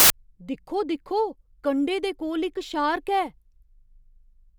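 From 0 to 0.10 s, file tags played as audio: an embedded cover picture's compressed bytes decode as very loud white noise, a hard-edged broadband block on the spectrogram.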